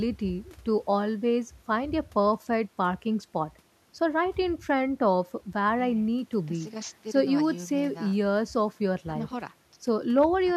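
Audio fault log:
No faults detected.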